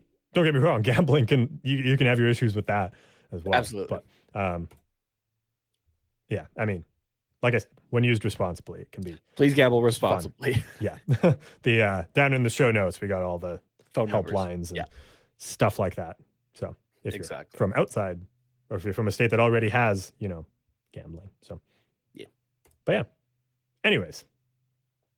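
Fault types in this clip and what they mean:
Nothing in this speech recording stood out as a fault on listening.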